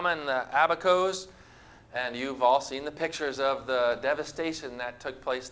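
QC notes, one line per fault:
No faults to log; the audio comes over a WebRTC call path using G.722 at 64 kbps, with nothing above 8 kHz.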